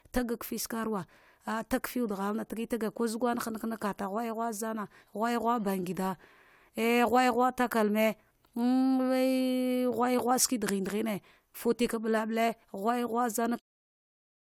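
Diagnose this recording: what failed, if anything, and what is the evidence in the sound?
Nothing failed in this recording.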